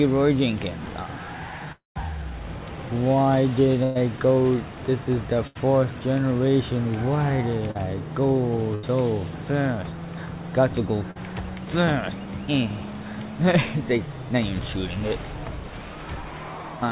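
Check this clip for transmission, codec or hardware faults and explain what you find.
The clip has six breaks in delivery, all heard through a narrowband call path that leaves nothing above 4 kHz, which fits G.711 A-law.

Long network dropout, 1.72 to 1.98 s: the last sound is stretched into a fading buzz or hiss, then about 150 ms of silence. This is likely a loss of about 240 ms of audio.

Burst of packet loss at 3.83 to 3.98 s, 5.47 to 5.58 s and 8.75 to 8.86 s: each loses 80 to 120 ms. The receiver holds and fades the last sound, and the audio resumes with that stretch missing.

Short concealed packet loss at 7.71 to 7.78 s and 11.11 to 11.18 s: about 40 ms each went missing and was patched from the preceding sound, leaving a brief smear or wobble.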